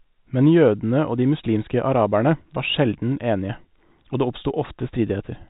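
No faults are audible; the speech carries the narrow, sub-4 kHz band of G.711 telephone coding, with its level-following quantisation hiss faint or absent.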